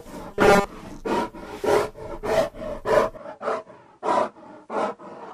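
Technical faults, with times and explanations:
0.31–0.65 s, robotic sound from repeated short buffers: the sound becomes a rigid metallic buzz at 200 Hz, likely because most of the audio was replaced by repeats of a 5 ms chunk. On a spectrogram this appears as evenly spaced horizontal bands at multiples of 200 Hz.
3.17 s to the end, input switched to a poorer device: with no gap, the sound turns duller and a few decibels quieter, likely from a change to a narrower-band input. A spectrogram shows a lower upper cutoff and a faint new noise floor far beneath the signal.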